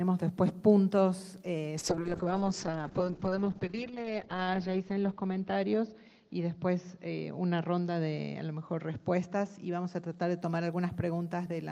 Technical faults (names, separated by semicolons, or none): call bitrate drop